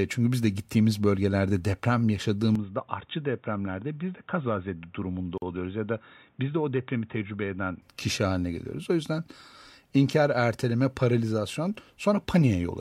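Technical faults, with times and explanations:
2.55–7.82 s, input switched to a poorer device: the sound turns dull and boxy with nothing above 3.8 kHz, drops about 5 dB, and gains a faint new noise floor, likely from a narrower-band microphone.
5.38–5.42 s, gap at a join of encoded pieces: a 43 ms silence with smeared edges interrupts continuous speech, left by untrimmed encoder delay and padding where separately encoded pieces meet.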